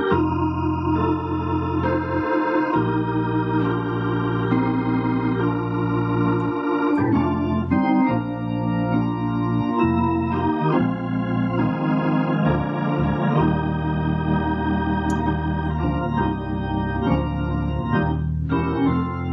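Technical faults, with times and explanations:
No technical faults, with times and explanations, are found.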